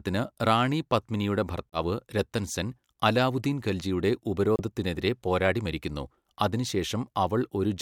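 At 1.70 s and again at 4.56 s the speech cuts out, for about 90 ms and about 50 ms, then resumes further along as if it had kept playing. The most likely cause is a Bluetooth dropout, where a few packets missed their deadline and the headphones output silence until good audio arrived. On a waveform each appears as a flat, empty gap, and on a spectrogram as a clean vertical blank band across all frequencies.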